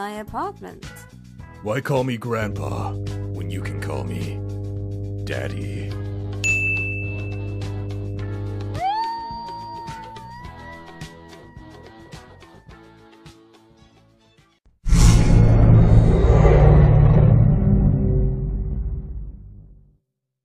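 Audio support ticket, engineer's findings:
Mains hum, 2.42 s to 8.79 s. Steady low tone at 50 Hz, fairly strong against the programme. Probable ground loop, or a transformer near the signal chain, coupling the power line into the signal. Check grounding and cable routing.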